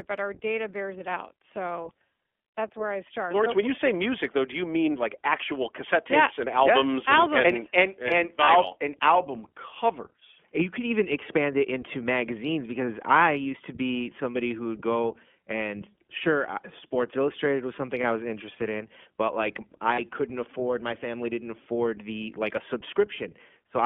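Throughout, the speech carries iLBC codec sound: band-limited to roughly 250 Hz–3.4 kHz, plainly rough and synthetic, consistent with 20 ms frames at 15.2 kbps. Lost iLBC frames occur at 8.44–8.49 s, 18.02–18.05 s and 19.94–20.00 s, about 40, 20 and 40 ms. The decoder repeats a pitch cycle with noise, giving a brief buzzy held vowel before speech recovers immediately.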